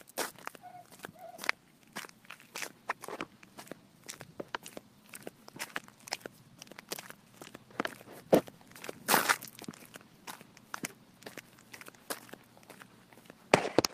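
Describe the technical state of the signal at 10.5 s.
No fault is audible at 10.5 s; the audio there is intact.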